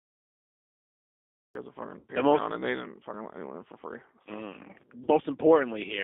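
A speech recording was carried over a G.729 codec at 8 kbit/s, which confines it to roughly 250 Hz to 3.6 kHz and gives the voice a plainly rough, synthetic edge throughout. The stream began late, a cut-off start, so digital silence runs to 1.55 s and the audio then jumps in mid-sound just before "has a". VoIP packet loss concealed by the speech codec follows at 1.99 to 2.06 s, right after "has a": about 60 ms went missing, which fits three 20 ms packets, and the decoder stretched the last sound into a buzzy tone or coloured noise that fades. A second 40 ms gap is concealed the same way at 5.04 to 5.11 s.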